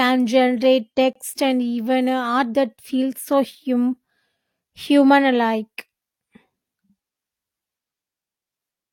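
At 1.13 s the speech drops out for about 24 ms, ending at 1.16 s, with abrupt edges on both sides. This is a gap between stream segments: the timestamps of adjacent segments leave a short hole, and the player fills it with silence. Nothing is lost, only delayed.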